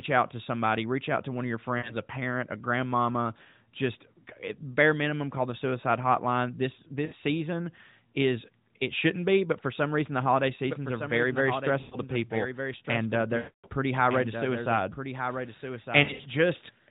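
At 1.78 to 1.95 s, between "to one of your" and "a parent a grandmama", and at 7.06 to 7.14 s, just before "season is it shouldn't", lost AMR speech frames make the decoder stretch the last good sound and fade it. On a spectrogram this shows as smeared, frozen harmonics that thin out, all below the narrowband codec's 4 kHz ceiling.

From 10.68 s, after "some reason the holiday", to the end, a doubled audio track appears: a dry copy about 10 dB quieter trails roughly a second behind, likely from a second capture path. It shows as faint, shifted repeats of the waveform envelope.

More lost frames follow at 11.80 to 11.97 s, at 13.38 to 13.68 s (the longest, decaying toward a gap), and at 16.04 to 16.27 s, where scattered short dropouts cause a broken warble.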